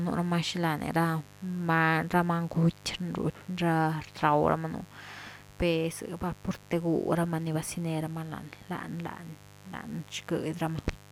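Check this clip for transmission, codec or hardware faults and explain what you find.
A mains buzz runs under the speech for the whole clip. It sits well below the speech, about 25 dB down. It is built on a 50 Hz fundamental. The sharp switching spikes from a dimmer, rectifier or unshielded run arrive twice per mains cycle, so the energy spreads into a dense ladder of harmonics reaching several kilohertz. That gives a steady, raspy edge rather than a smooth low hum. A pure hum would sit almost entirely at 50 Hz and its first few multiples, sounding soft and tonal instead of gritty.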